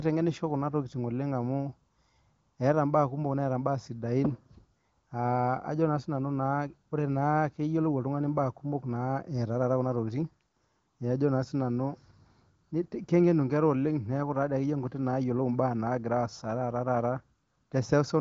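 No technical faults detected.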